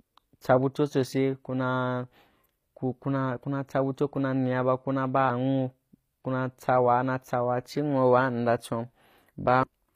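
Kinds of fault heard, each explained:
HE-AAC compression: The treble of the speech sounds synthetic throughout, with s sounds turning gritty and lisping, the codec damage plainly audible, and nothing at all above about 15.5 kHz. This is likely HE-AAC v2 at a low rate, which fits a bitrate around 24 kbps. Only the lower spectrum is truly coded, and the upper bands are rebuilt by copying lower content upward under a coarse envelope, so the highs stay bright but don't match the original harmonics.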